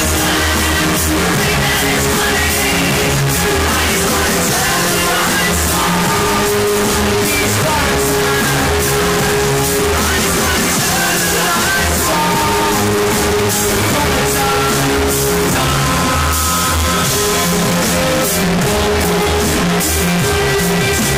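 At 12.13 s, audio missing between chunks: roughly 20 ms skips out, likely at a 5 s chunk boundary, and the ends are spliced shut without a dropout's silent gap.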